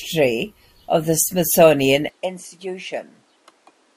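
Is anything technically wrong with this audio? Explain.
Yes. At 2.09 s the input was likely switched to a poorer device, which narrows the band and changes the gain. From there to the end the speech turns duller, with nothing above 11.4 kHz, drops about 10 dB with no gap, and sits over a new, faint background noise.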